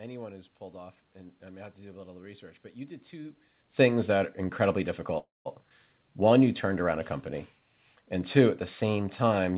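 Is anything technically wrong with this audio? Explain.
Yes. Three related faults cluster between about 5.2 and 6.5 seconds in this speech recording.

At 5.18 s, right after "things that are incredibly", there is a call audio freeze lasting until 5.48 s. The delay points to packets held up in transit that let the jitter buffer run dry. The receiver stretched the last sound into a fading buzz for about 0.27 s, and roughly 0.19 s of that is silent. When audio resumes it picks up exactly where it stopped, so nothing is lost, but the speech now runs about 0.27 s late.

At 5.69 s there is a skip ahead, ending at 5.73 s. Roughly 70 ms of speech is dropped, which fits the jitter buffer discarding queued audio to claw back some of the delay built up by the freeze. Only a few milliseconds of fill join the two sides, so the speech lurches forward with an abrupt splice.

From 5.98 to 6.46 s, just before "turned around a company", there is a jitter buffer slow-down. 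The buffer was short of reserve and repeated single pitch periods and pause fragments to rebuild it, adding about 52 ms. Playback drops to 91% speed at unchanged pitch, so the sounds in this stretch are drawn out.

The call path's G.711 A-law coding leaves no content above 4 kHz, and the level change near 3 s comes from the talker moving relative to the microphone.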